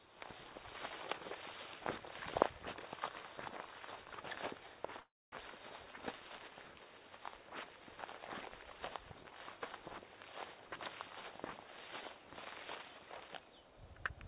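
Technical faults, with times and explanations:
5.0–5.35 s, call audio freeze: the sound halts, the last fragment trails off as a brief fading buzz or hiss, then a quarter-second of silence, after which playback resumes where it stopped with nothing skipped. Delayed packets likely drained the jitter buffer, adding 320 ms of lag.
12.29–13.62 s, jitter buffer speed-up: the sound runs about 12% fast at unchanged pitch and feels hurried, as the receiver trims short pitch-period slices in succession, roughly 150 ms in all, to pull the excess buffered delay back down; the audio stays within the 4 kHz call band.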